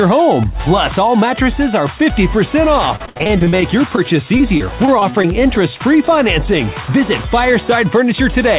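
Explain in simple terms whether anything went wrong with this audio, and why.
Two kinds of fault are audible.

Repeated packet loss (robotic sound) hits from 2.96 to 3.99 s. Bits of audio went missing over and over, up to 62 ms at a time. The gaps were patched by stretching the last sound, so it turns choppy, with pieces missing. A milder burst follows from 4.37 to 5.26 s, with shorter holes.

Jitter buffer slow-down happens from 3.82 to 4.30 s and again from 5.12 to 5.93 s. The receiver ran short of audio in reserve or had just raised its delay target, so it repeated tiny slices to buy time. The sound drags, at 89% and then 94% of normal speed, without changing pitch.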